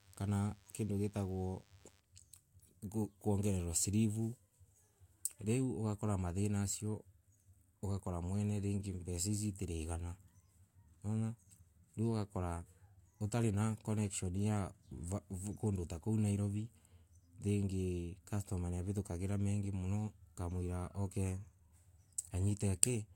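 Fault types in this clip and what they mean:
DECT cordless phone buzz: a DECT transmitter's 10 ms radio bursts are rectified by the audio circuit. The result is a faint, thin 100 Hz buzz under the speech from 0.0 to 2.0 s.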